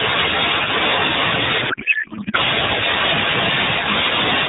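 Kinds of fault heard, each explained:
Codec payload misread: from 1.70 to 2.36 s the AMR decoder unpacks frames with fields misplaced, which fits octet-aligned packing read as bandwidth-efficient. The speech turns to garbled warble barely following it, and a spectrogram shows harmonics replaced by smeared noise below 4 kHz.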